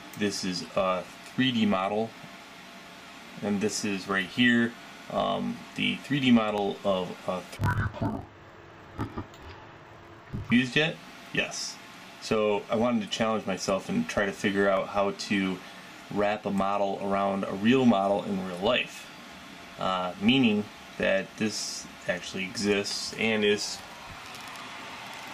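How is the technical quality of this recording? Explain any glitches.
There's one real glitch, from about 7.57 s to 10.53 s, where the sound drops an octave and turns doubled and choppy. That's interleaved audio read as planar. Each chunk of alternating left-right samples gets split down the middle, so both halves play at half speed, side by side. The pace holds but pitch falls 12 semitones. The chunks are about 23.2 ms long, which fits a 1024-sample block, giving a choppy flutter around 43 Hz.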